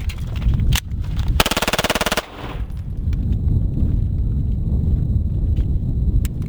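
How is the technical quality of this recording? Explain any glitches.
The recording has one fault, imaging from sample-and-hold upsampling, present throughout. Samples were repeated without smoothing, mirroring content into roughly 11 to 22 kHz at about -23 dB, heard as a signal-following metallic fizz.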